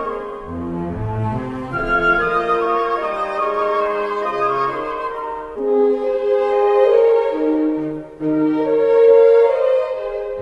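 Nothing in this one stands out as a technical fault at any point, so there's no problem here to walk through.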